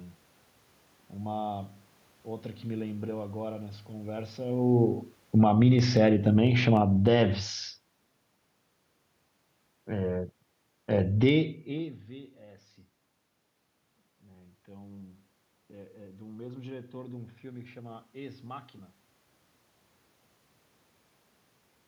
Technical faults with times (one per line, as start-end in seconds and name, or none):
4.51-8.21 automatic gain falling